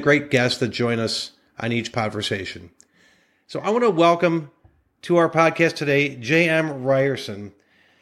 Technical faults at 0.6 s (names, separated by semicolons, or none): none